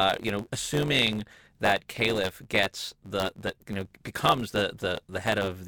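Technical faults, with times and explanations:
Throughout, block size mismatch (truncated): block tails dropped, giving a 91.9 Hz buzz and speech 1.07 times fast, fitting 512-sample blocks.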